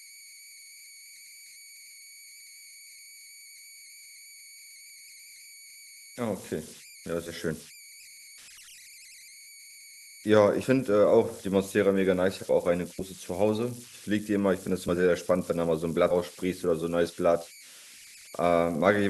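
A speech recording carries converter idle tones throughout: a whistle around 2 kHz at about -22 dB relative to the signal, strongest in pauses. Undithered delta-sigma conversion of a small signal causes it. Unlike mains hum, it sits high and is not tied to 50 or 60 Hz. Compressed frames are skipped at 7.26–7.31, 10.63–10.65, 12.99–13.01, 14.88–14.90 and 16.10–16.13 s. The audio jumps ahead by roughly 40 to 100 ms, which fits 10 ms frames.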